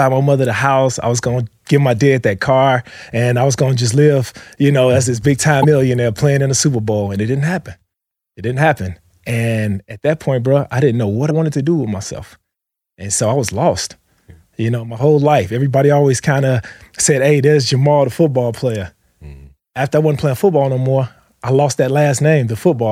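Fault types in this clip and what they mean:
Damaged data in a compressed stream: corrupted bytes make the decoder misread frames and resync, leaving two 40 ms blips.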